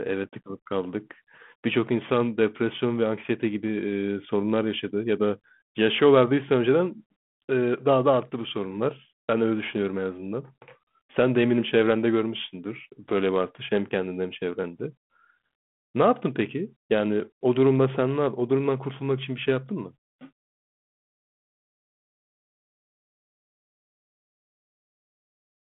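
Nothing goes wrong anywhere in this speech; it just sounds like an ordinary call over a 32 kbit/s G.726 ADPCM link, with the usual telephone band of roughly 150 Hz to 3.4 kHz and only a light trace of that codec's own grain.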